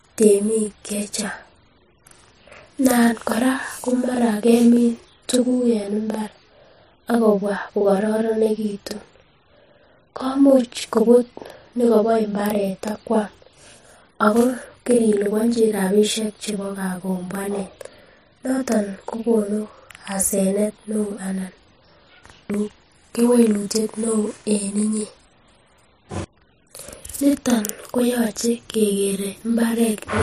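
Speech throughout carries a channel delay (doubling): one channel runs about 43 ms late, which fits a 2048-sample buffer, and summing to mono leaves a second copy at equal level. Unlike room reverb, it is one clean slap echo with no decaying tail.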